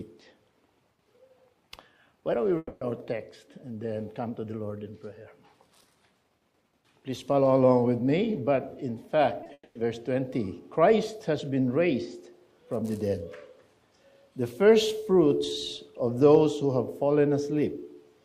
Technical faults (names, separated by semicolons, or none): long network dropout; short concealed packet loss